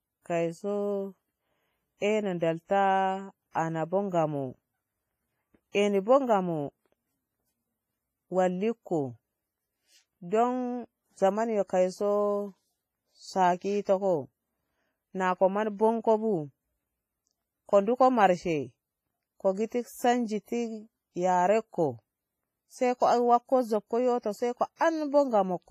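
Right through the speech there's a washy, ringing quality with hiss that swells and fades with the level, and nothing above 15.4 kHz. That's heavy WMA compression damage, likely from an old WMA encoder at a low bitrate, something like 24 kbps.

Pre-echo turns up three times. There's a 39 ms smear at 3.51 to 3.55 s, a 30 ms one at 5.72 to 5.75 s just before "eni bo", and a 48 ms one at 24.76 to 24.81 s. Each time, codec noise meant for a sharp attack leaks into the quiet moment before it, so you hear a brief hiss and the onset sounds softened.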